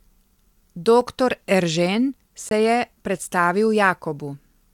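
At 1.01 s, and again from 2.49 to 2.51 s just before "je predstavil", the speech drops to a block of digital silence. The first gap, about 3 ms, is a tick. The second, about 21 ms and consistent with one unfilled 1024-sample buffer, is a short hole.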